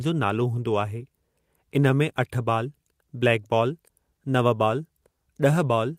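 Speech, with nothing technically wrong with it.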